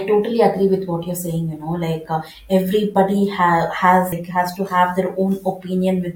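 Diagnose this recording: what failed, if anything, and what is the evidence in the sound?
Damaged data in a compressed stream: a brief glitch at 4.11 s. Corrupted bytes there made the decoder misread frames and lose sync until it found the next header.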